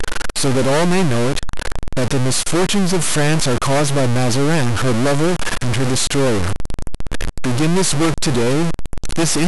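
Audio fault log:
Throughout: stuck bit. The speech carries a grainy noise or buzzy distortion that rides along with it, and the pauses between phrases are filled with a gritty noise floor instead of falling quiet. The likely cause is one data bit held permanently at 0 or 1, so roughly half of the sample values are pushed off by that bit's fixed weight. Because which samples are hit depends on the waveform, the error follows the speech, and near silence it flips with the sign of the small values to make that steady hiss.
5.47 s: dropped samples. A single sharp click cuts through the speech at this point. It would show as a thin vertical line across the whole spectrum, and no sound is missing around it. The likely cause is a tiny run of samples, a small fraction of a millisecond's worth, vanishing from the stream. The waveform then jumps straight from one value to a later one, and that sudden step is too brief to remove audible content but sharp enough to be heard as a click.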